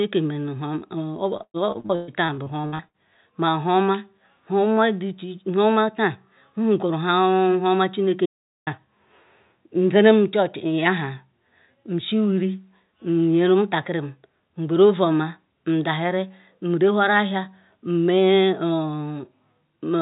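From 1.37 to 2.97 s the speech breaks up with repeated packet loss, giving a robotic sound. Over about 1.6 s, around a dozen short holes open one after another, the longest about 123 ms. Each is patched by stretching the last bit of sound, so the concealment fills roughly 38% of that span with a robotic smear. It stutters in quick succession, with fragments of the speech missing between the patches.

At 8.26 s, right after "huoma chineke", there is an audio dropout to silence lasting about 0.41 s, until 8.67 s. The signal falls silent. There is no room tone and no concealment filling the gap, and whatever was said in that moment is gone. That dead silence is what separates it from the packet-loss stretch, which keeps covering its holes with synthetic sound. The likely cause is a brief loss of the input, such as a link failure, a disconnect or a momentary mute. Throughout, the speech is band-limited with nothing above 4 kHz, which fits a narrowband telephone codec on the call path.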